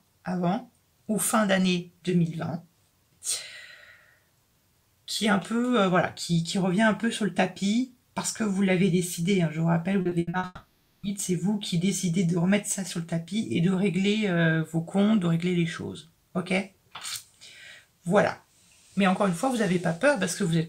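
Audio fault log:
10.01–10.45 s: repeated packet loss (robotic sound). Five short gaps hit this stretch, the longest 80 ms. Each hole is bridged by stretching the last sound forward. Then the next hole arrives almost at once. About half of the span, roughly 220 ms, is patched this way. The sound turns choppy, with small pieces missing between the patched bits.
10.45–11.05 s: long network dropout. Audio stops arriving for about 580 ms, likely a network outage. The receiver keeps extending the last sound as a fading buzz to fill the hole. Only about 10 ms of true silence is left near the end. The audio then resumes further on. The lost portion is never played.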